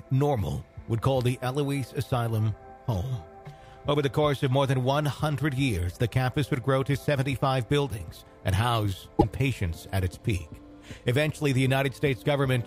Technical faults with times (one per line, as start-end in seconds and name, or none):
9.16-9.24 damaged data in a compressed stream